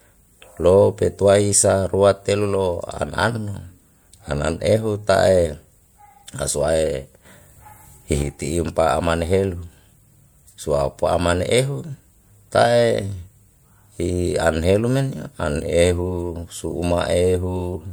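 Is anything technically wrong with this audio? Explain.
Yes. A sudden gain jump runs from 7.25 to 8.22 s, where the speech and its background noise step up together by about 6 dB, then drop back. The likely cause is a digital gain setting applied instantly, from one sample to the next, without a ramp.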